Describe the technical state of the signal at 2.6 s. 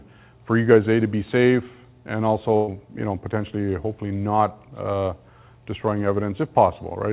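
At 2.6 s the signal is inside a burst of packet loss running from 2.56 to 2.70 s: a short run of packets never arrived in time, so the receiver concealed the gap by stretching the last decoded sound for about 114 ms and tapering it down, with no silence. That fill is heard as a held, fading continuation of the preceding sound. When the audio picks up again, about 120 ms of the original has been skipped, within a band already capped at 4 kHz by the call codec.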